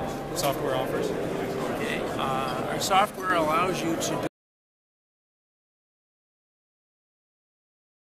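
There are two faults. At 3.06 s there's a sudden gain jump: the level drops by about 6 dB in a single step, background included, and stays down until 3.3 s. That's likely a gain setting applied instantly with no ramp, so nothing smooths the change. Then at 4.27 s the sound cuts out completely, an audio dropout to silence that runs right to the end. It's plain silence with no room tone, most likely from a lost input while the recorder kept writing.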